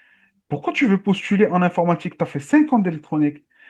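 No technical faults can be heard anywhere in the speech, so there is nothing to describe in time order.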